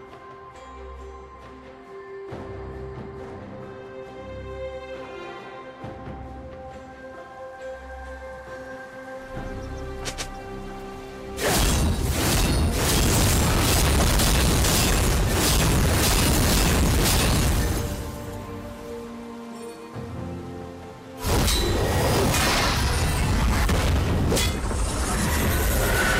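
At 5.04 s, DAB burbling: bit errors from weak reception slip past error correction and corrupt a few audio frames, putting short blips of noise into single sub-bands. From 11.43 to 17.92 s, hard clipping: the signal is driven about 17 dB beyond what a stage can pass, its peaks are sliced flat, and loud moments turn into harsh fuzz. Within that stretch, at 14.00 to 14.02 s, DAB burbling returns as another short burst of blips. From 21.25 s to the end, hard clipping recurs at about 12 dB of overdrive, adding a milder crackle and fuzz on peaks.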